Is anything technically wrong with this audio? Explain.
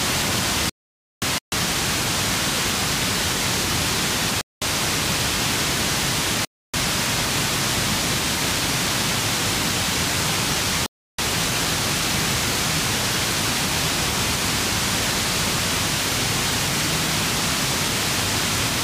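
Yes. Just after the start, at 0.70 s, the sound vanishes into dead digital silence until 1.22 s, losing about 0.52 s with no room tone or background in the gap before it resumes abruptly mid-flow. This is an audio dropout to silence, likely caused by the input being lost, through a disconnected device, a failed link or a mute, while the recorder kept writing silence, so whatever happened in that half-second is simply missing.

Four more short cuts to silence occur at 1.38 to 1.52 s (138 ms), 4.41 to 4.62 s (206 ms), 6.45 to 6.74 s (288 ms) and 10.86 to 11.19 s (324 ms), each pausing the sound and then carrying on, the gaps growing longer through the clip. These are Bluetooth stalls, likely from radio interference delaying packets so the headphones' buffer drained and playback halted until the resent data arrived.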